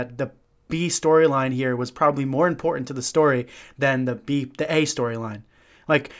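No technical faults can be heard anywhere in the recording.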